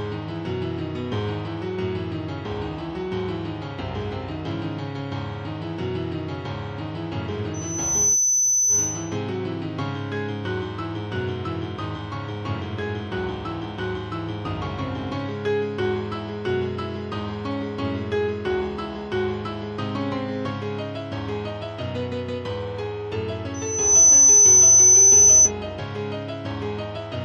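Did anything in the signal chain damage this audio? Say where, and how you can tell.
Yes, there's loudspeaker feedback squeal in the acoustic and analogue front end, from 7.54 to 9.17 s and again from 23.54 to 25.52 s. A 6 kHz tone swells up over roughly half a second and ends up about 10 to 15 dB over the programme. The mic is hearing its own speaker, and the loop gain tips past one at that frequency.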